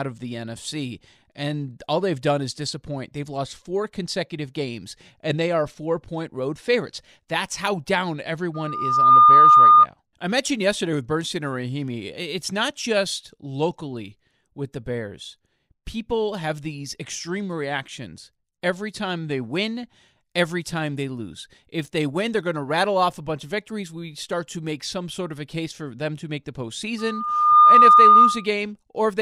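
Speech with a piercing 1.2 kHz loudspeaker feedback squeal that swells over about half a second (about 0.7 s the second time) to sit roughly 15 dB above the voice, from 8.54 to 9.86 s after "how down" and from 26.98 to 28.47 s after "them to make the". The microphone picks up its own loudspeaker, and at 1.2 kHz the loop gain exceeds one.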